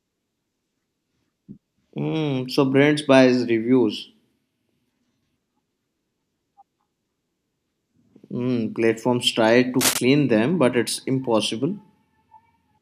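Between "platforms try" and "clean them but it's", from 9.79 to 9.98 s, a cable scratch noise rasps over the speech at roughly its level, likely from a worn cable or connector being moved. A spectrogram shows a ragged broadband smear, and the waveform shows jagged, irregular spikes.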